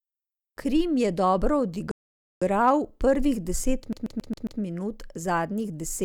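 At 1.91 s, right after "je dobro", the speech drops into a rebuffering stall: playback ran out of downloaded audio and halted until more arrived, then picked up exactly where it left off at 2.42 s. About half a second of dead air is inserted, but no speech is lost. On a waveform this is a flat line. On a spectrogram it is a clean, full-band blank column with the speech on either side matching seamlessly.

From 3.93 to 4.61 s, just after "prvih deset", the audio shows a CD stuck on one turn. A scratch keeps throwing the laser back to the same point, so one 136 ms slice of speech plays five times with a brief mute at each jump. The result is a rapid, even stutter. The waveform shows five identical segments separated by tiny gaps. On a spectrogram the same short pattern repeats like a stamped tile across the span.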